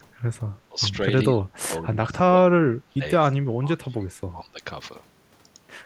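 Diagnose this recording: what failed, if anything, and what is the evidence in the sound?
Speech suppressed in double talk, in call processing: the speech dips at 0.0–0.06, 0.39–0.46, 0.69–0.8, 1.32–2.43 and 2.87–4.61 s, by about 25 dB at worst. The likely cause is an echo canceller turning down the near talker while the far end was also speaking.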